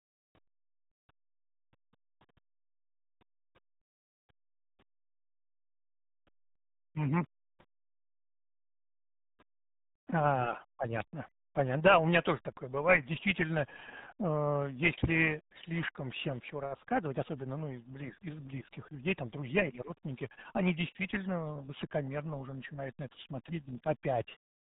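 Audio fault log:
Throughout: RealAudio 14.4 codec. The speech is heavily damaged, muffled and gargly, with nothing above about 3.9 kHz. The sound points to the 8 kbit/s RealAudio 1 codec built for dial-up modems. At that rate the codec keeps only a coarse model of each short stretch of speech. The high band is cut off entirely, so consonants lose their edge. The coarse rebuilding adds a bubbling, gargled texture to every syllable.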